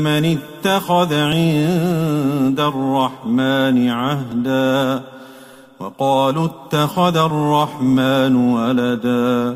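At 1.32 s, 4.32 s and 7.30 s there is a click or tiny skip, spaced roughly 3 s apart. Each is an overlap between stream segments: two segments claimed the same stretch of time, so the player trimmed a few milliseconds that were never actually duplicated, and the audio jumps ahead. On a waveform the trace steps abruptly at each point. A spectrogram shows a thin vertical broadband line at each time.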